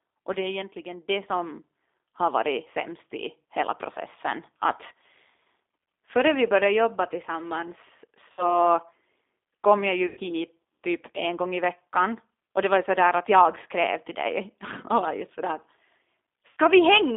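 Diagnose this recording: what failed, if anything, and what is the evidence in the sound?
The whole call has gone through the G.729 codec, most likely G.729A at 8 kbit/s, and it's the codec stage you hear first. The speech is band-limited to roughly 200 Hz to 3.6 kHz, so there's no air on top and little weight below. The coder rebuilds each 10 ms frame from a vocal tract filter, a pitch predictor and a few pulses, which is why the speech comes out rough, slightly synthetic and plainly degraded from start to finish.

There's also VoIP packet loss concealed by the speech codec, a network fault that the decoder tried to cover. It hits at 8.32 to 8.64 s (about 60 ms of audio missing), at 10.07 to 10.20 s just after "kom jag" (about 100 ms missing), and at 16.51 to 16.57 s (about 60 ms). In each gap the decoder keeps playing its last pitch and filter with falling gain, so the sound smears into a buzzy tone or a coloured noise that fades. 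The first gap stays weak and distorted well past the missing stretch, because each frame after it builds on the corrupted state. The gap lengths fit runs of three and five lost 20 ms packets.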